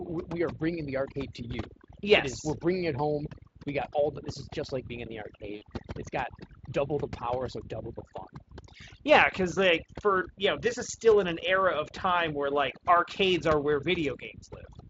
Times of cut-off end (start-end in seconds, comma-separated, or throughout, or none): none